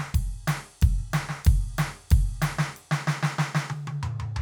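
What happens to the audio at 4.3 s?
Nothing goes wrong at 4.3 s; the music plays through that moment intact.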